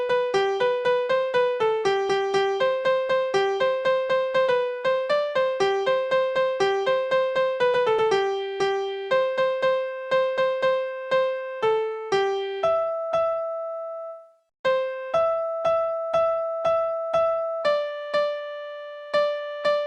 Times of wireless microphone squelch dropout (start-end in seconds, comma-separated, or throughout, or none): none